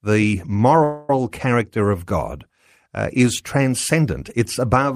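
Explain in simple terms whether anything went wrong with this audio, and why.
At about 0.83 to 1.16 s, just before "character of", there is a call audio freeze: the sound stalls into a fading buzz for about a quarter second, then resumes. That was likely delayed network data. Unlike a dropout, nothing is skipped; the speech is only pushed later.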